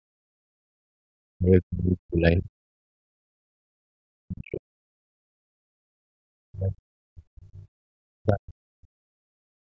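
From 0 to 1.05 s the room sound drops away by about 34 dB. This is background gated by the echo canceller: while the far end plays through the loudspeaker, the canceller clamps the microphone hard. The waveform flattens almost to silence, and the spectrogram shows the noise floor going dark across all bands. At 1.33 to 2.5 s the talker's speech is cut back by roughly forty decibels. This is speech suppressed in double talk, likely caused by the canceller failing to tell the local voice from loudspeaker echo and attenuating both. It sounds like the voice thinning or chopping out, and the spectrogram shows the harmonics weakening. The gating returns at 2.78 to 3.78 s (about 40 dB) and at 5.24 to 6.21 s (about 35 dB). The double-talk cuts recur at 4.06 to 4.96 s, 6.49 to 7.7 s and 8.16 to 8.96 s. A final gated stretch runs from 9.24 to 9.65 s, about 35 dB down.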